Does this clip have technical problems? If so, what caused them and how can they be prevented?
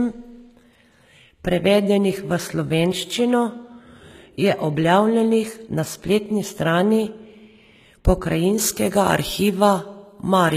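Yes. Throughout, the treble sounds rebuilt rather than recorded, with nothing above 14.9 kHz and plainly audible grit on s sounds. The likely cause is HE-AAC compression, whose spectral band replication copies lower bands upward, which fits a bitrate near 20 kbps. The misaligned, metallic highs set it apart from plain low-pass dulling. Encoding at a higher bitrate, or with plain AAC, prevents it.

From 8.58 s to the end at 10.56 s, pre-emphasis was left on. The treble is boosted by about 8 dB at 10 kHz against 1 kHz, which fits the CD 50/15 µs curve. Unlike the codec damage, this is a clean, tilted brightness that appears suddenly. Applying the matching de-emphasis on playback or import prevents it.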